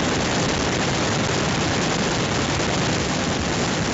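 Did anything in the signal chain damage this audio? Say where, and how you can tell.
Yes. The harshest damage is at the converter: the speech has a hard, crackling edge on every loud syllable from start to finish, with flattened peaks and a gritty buzz. This is microphone overload, most likely from an input level set about 13 dB too hot, so the waveform tops slam into full scale and are sliced off. Around a fifth of the samples sit at that ceiling, and the squared-off tops add dense distortion harmonics.

On the transmission link, two short bursts of pops and rough, unsteady level appear at 0.40 to 0.57 s and 3.51 to 3.66 s. These are bit errors on an ADPCM link, at a rate of roughly half a percent. A flipped bit corrupts more than one sample, because it knocks the decoder's step size and predictor off track. The error then keeps ringing for a few milliseconds until the decoder recovers, which gives the smeared crackle rather than a single click.

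In the call processing, the level drops suddenly by about 2 dB at 3.02 s. Both the speech and the background fall together, which points to a gain change at the device rather than in the source. This is the microphone volume stepped down, likely the call software reacting to the sustained clipping by lowering the input gain in one step. The drop is too small to cure the overload, and the clipped edge continues after it.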